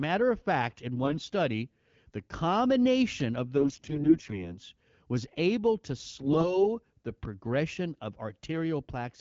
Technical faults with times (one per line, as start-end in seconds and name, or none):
1.04-1.26 AMR bit errors
3.56-4.57 AMR bit errors
6.19-6.67 AMR bit errors